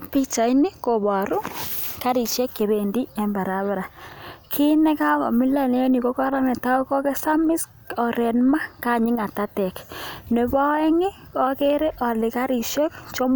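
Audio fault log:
Nothing in this speech recording stood out on listening.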